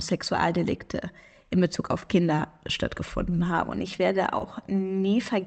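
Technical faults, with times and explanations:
2.00–2.03 s and 4.39–4.41 s, short concealed packet loss: Two brief gaps in the Opus call stream, roughly 10 ms and then 20 ms just after "ich werde", arrived too late for the decoder. The receiver patched each hole by extending the preceding sound, pitched where voiced or as shaped noise where not, then blended back into real audio. Each patch is audible as a fleeting smear or wobble against the 8 kHz-limited call sound.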